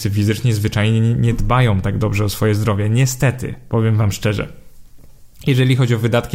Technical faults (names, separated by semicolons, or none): none